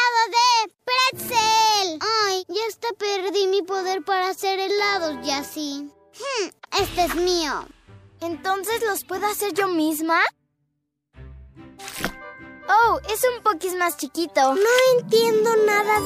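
At 3.28 to 3.30 s, 8.64 to 8.67 s and 14.29 s, two or three corrupt frames get decoded anyway. Flipped bits scramble the frames' gains and codes, throwing energy into the wrong frequencies as a quick chirpy blip. The middle one is loudest, about -15 dBFS. The last is faint, about -45 dBFS.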